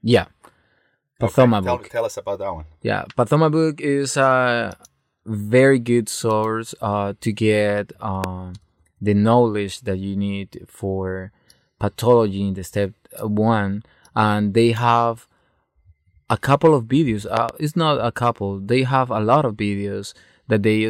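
At 8.24 to 8.26 s a loud pop cuts through the speech. It is a single sharp thump, roughly 15 dB above the surrounding level. The likely cause is a sudden voltage pulse, perhaps from a switch, a plug or static, landing on the signal. At 17.37 to 17.51 s a second loud pop arrives as two quick thumps, again roughly 15 dB up. In both cases the speech carries on underneath.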